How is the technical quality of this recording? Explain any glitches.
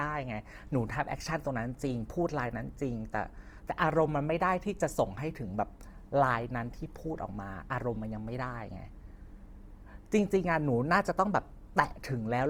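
The recording has two audible faults: coding damage across the whole clip and a stretch of electrical buzz partway through.

Throughout, the speech sounds grainy and rough, with noisy texture where tones should be clean. This is likely Opus compression in its music mode, filling starved bands with noise, which fits a low bitrate around 24 kbps.

From 6.46 to 10.37 s, a faint, steady, raspy mains buzz sits well below the speech. Switching spikes twice per 60 Hz cycle spray harmonics upward into kilohertz.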